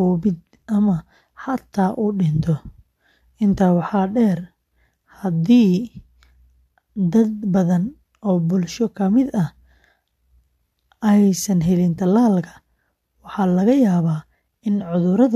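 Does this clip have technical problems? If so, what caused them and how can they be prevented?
No, the speech in this clip comes through as a continuous, steady signal with no technical faults to trace or prevent.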